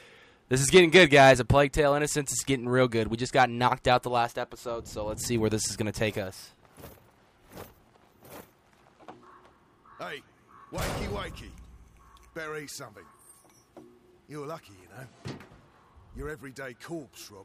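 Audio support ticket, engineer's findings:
No audible defects found on review; signal path checks out, nothing to action.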